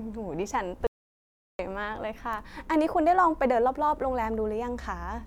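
At 0.87 s the speech cuts off mid-flow and the track falls to silence until 1.59 s, an audio dropout to silence lasting about 0.72 s. There is no room tone or noise floor in the gap, and the speech resumes abruptly at the far edge. The input signal was likely lost while the recorder kept writing samples, and whatever was spoken during that interval is missing.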